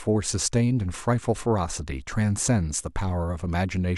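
No technical faults can be heard anywhere in the speech.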